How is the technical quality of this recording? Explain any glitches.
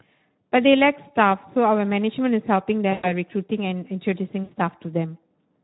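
The recording has audible technical problems: plainly audible coding damage throughout, plus two short dropouts that the decoder papered over.

Speex codec damage runs through the whole clip. This CELP speech coder, from older VoIP and game chat, rebuilds the voice from a pitch predictor and a small codebook of excitation pulses. With so few bits for that excitation, the speech comes out hoarse, grainy and somewhat noisy, which fits a rate of around 11 kbps. Any content above 8 kHz is only a shaped noise fill, not real detail.

VoIP packet loss concealed by the speech codec occurs from 2.91 to 3.12 s and again from 4.43 to 4.54 s. During each gap the decoder had no new data, so it kept repeating its last pitch and filter settings while turning the gain down step by step. About 120 ms went missing in the first gap, which suggests six lost 20 ms frames, and about 80 ms in the second, suggesting four. 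Each gap sounds like a smeared, buzzy or noisy hold that fades out. Because every decoded frame depends on the one before it, the voice stays thin and distorted for a short time after real packets resume.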